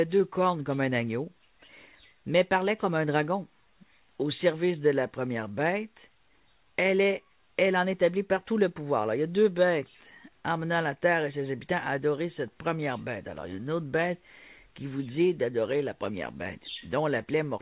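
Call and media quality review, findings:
Clock drift between sender and receiver, whole clip. Sender clock running fast by around 4 percent; receiver jitter buffer keeps overfilling, so playout must shed material continuously. Audible as uneven tempo and small, irregularly spaced hiccups.

Repeated timing corrections, 0.2 to 17.59 s. Receiver cuts short pieces to keep pace, net playback near 104 percent speed. Edits all shorten, spaced unevenly; faint skips over the band-limited sound, with nothing above 4 kHz, consistent with G.711 mu-law.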